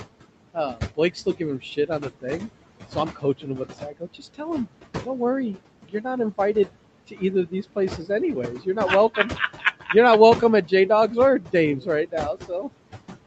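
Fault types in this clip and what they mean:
Noise suppressor artifacts: Throughout the clip the suppressor pulls the room noise down by about 18 dB in the gaps, then lets it back up under the speech, so the background pumps in step with the talking. Unlike steady room noise, which sits about 13 dB below the speech at a constant level, this residue changes frame by frame.
Speech cut by the noise suppressor: Here the suppressor mistakes parts of the speech for noise and turns them down with the background, by about 15 to 17 dB at the deepest. It happens in three stretches, from 0.54 to 2.42 s, 2.95 to 4.41 s and 5.06 to 12.7 s, totalling under two seconds of swallowed consonants and faint word endings. Unlike a dropout, the sound fades rather than stopping.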